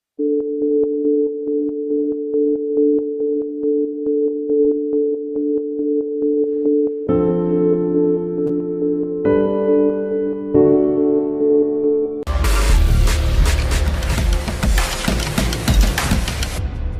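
Short concealed packet loss occurs three times, at 1.25 to 1.29 s, 4.61 to 4.67 s and 8.47 to 8.51 s. About 20 ms of audio failed to arrive at the first and third points, and 40 ms at the second. The receiver bridged each hole by extending the preceding sound and then blending back, so each one comes across as a brief smear or wobble. The longest is at 4.6 s. Unlike a true dropout, none leaves silence or a hard click.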